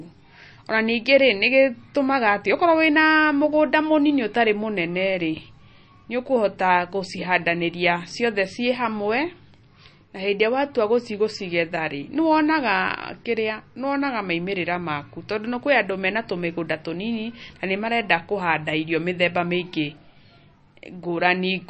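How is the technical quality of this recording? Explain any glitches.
The recording is noticeably degraded by lossy compression throughout its length.

MP3 compression, present for the whole clip, is the likely cause: the damage fits a low bitrate of around 32 kbps. With so few bits, the encoder discards everything above 8.3 kHz, leaving the speech dull and lacking air. It also drops weak frequency components that flicker in and out from frame to frame, giving a plainly audible watery, swirling texture, with metallic chirps on s sounds and softened attacks.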